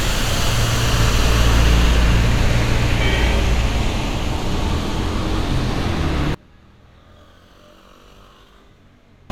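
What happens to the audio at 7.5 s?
At 7.5 s the sound sits inside a collapse that runs from 6.34 s to 9.3 s, heard as a drop of about 29 dB to a faint residue. The likely cause is one channel inverted: with one side's polarity reversed, the material common to both channels cancels when summed to mono, leaving only their difference. Unlike a dropout, the sound never goes fully silent.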